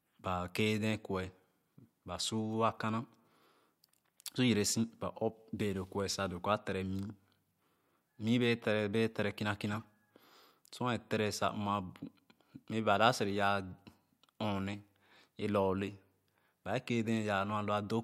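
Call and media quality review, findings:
Corrupt frame decoded, 9.68–9.85 s after "tere kìna": chirpy noise burst peaking about -25 dBFS. Decoder played bit-flipped frames, roughly seven; spectrogram shows misplaced energy smear.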